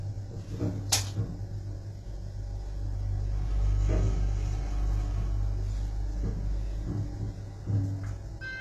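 Likely low-bitrate HE-AAC compression, consistent with roughly 16 kbps, runs throughout: treble is rebuilt by spectral band replication and ends near 12.3 kHz, leaving highs gritty, metallic and misaligned.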